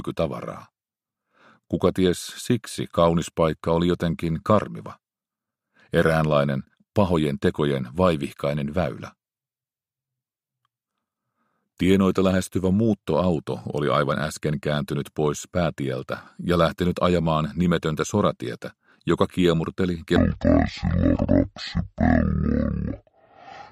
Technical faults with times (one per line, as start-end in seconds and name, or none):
20.16-23.72 section at the wrong speed